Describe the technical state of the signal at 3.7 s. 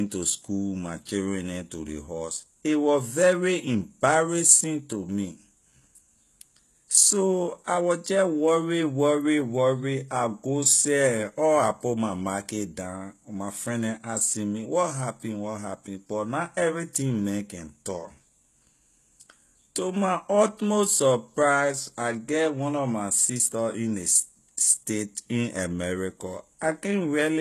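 At 3.7 s the speech has gritty, metallic sibilants and a synthetic-sounding treble, with nothing at all above 12.3 kHz. This runs through the whole clip. The likely cause is HE-AAC compression at a low rate, fitting roughly 16 kbps, where the upper band is rebuilt from copied lower harmonics.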